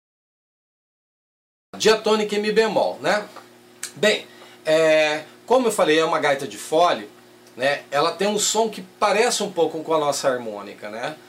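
The clip holds digital silence from 0.0 s until 1.74 s, and then a cut-off start: the sound enters abruptly, already partway through, because capture began late and missed its opening. Nothing builds up. The level jumps from nothing to full in one step. That sets it apart from a natural quiet lead-in or a fade-in, where the attack or ramp would still be heard rising out of the silence.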